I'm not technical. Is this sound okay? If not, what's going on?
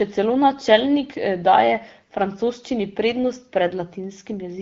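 Yes, this one's fine: nothing in the recording stands out as a problem, so there's nothing you need to worry about here.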